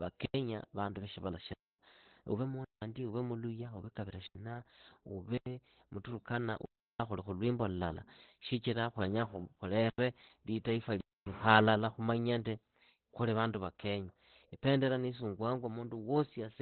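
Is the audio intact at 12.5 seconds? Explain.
No. At 12.5 seconds the speech carries Opus compression, as it does throughout. Nothing sounds above about 4.3 kHz, so it is muffled and hoarse. That points to a narrowband speech mode at around 12 kbps, likely the SILK coder squeezing out detail heavily.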